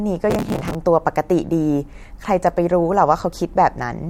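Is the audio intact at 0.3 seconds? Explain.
No. At 0.3 seconds a burst of processor overload crackle begins and runs to about 0.75 s. The processor keeps missing its deadlines for buffers of a few milliseconds each, dozens of times in a row, and each miss replays a stale scrap of old audio with hard edges, so the speech sounds gritty and torn. On a waveform the span shows jagged discontinuities; on a spectrogram, dense vertical broadband streaks.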